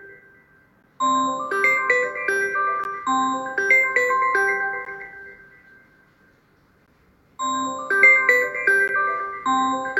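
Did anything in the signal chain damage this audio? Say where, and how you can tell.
Yes. There is a gap between chunks at the chunking stage of storage or playback. Short, hard-edged silences of about 13 ms fall at 0.83, 2.84, 4.85, 6.86 and 8.88 s, spaced about 2.0 s apart. The audio was handled in 2-second blocks, and silence was inserted at each join. The sound after each hole picks up exactly where it stopped. A dropout from lost packets would skip material and come at irregular times.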